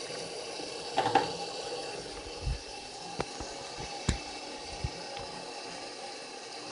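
From start to finish the sound carries a rough, hissy halo and a smeared, underwater blur, with nothing above 10.6 kHz. This is likely Nellymoser compression: the old Flash codec spends a fixed two bits per sample on short blocks, so quieter bands get no bits and are refilled with noise, and the plainly audible damage fits a rate near 44 kbps. That noise fill sets it apart from a simple low-pass, which would sound dull but clean.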